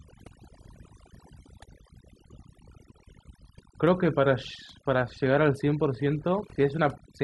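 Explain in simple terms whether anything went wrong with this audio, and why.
Overdone noise removal runs through the whole clip. A noise reducer was pushed too hard, switching off whole slices of sound along with the noise. Between phrases you get near silence with little twinkling specks.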